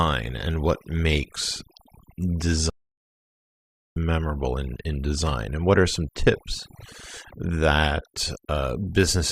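Overdone noise removal runs through the whole speech clip. A noise reduction stage set far too aggressively has suppressed every frequency band that sits close to its noise estimate. The background drops away and breaks up into twinkling specks.

A playback stall cuts in from 2.70 s to 3.96 s, silencing the output for about 1.26 s before speech resumes with "memorable in in design". The player likely ran short of data or had its thread blocked, so output halted mid-flow until it recovered.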